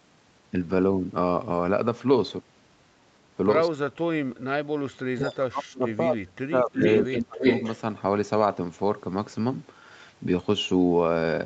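An echo canceller likely mistook near-end speech for loudspeaker echo during double talk, so speech is suppressed in double talk from 3.71 to 4.34 s and again from 5.09 to 6.84 s. The speech sinks by a very deep margin.

From 6.74 to 7.79 s, a loudspeaker echo canceller likely failed to remove its microphone pickup, and this echo leak sends back a copy delayed by 319 ms. It arrives about as loud as the speech itself, a distinct second voice trailing behind.

Inside that echo, from 7.10 to 7.41 s, the same double-talk suppression briefly returns, pulling the speech down by roughly 30 dB.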